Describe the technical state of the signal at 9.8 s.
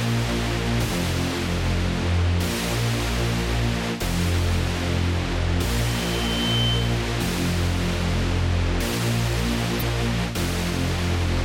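At 9.8 s the signal hits damaged data in a compressed stream, running from about 9.79 to 9.83 s, roughly 44 ms. Corrupted bytes there leave the decoder misreading its frames until it regains sync at a later frame header, producing a brief disturbance such as a chirp, squawk, click or short hole.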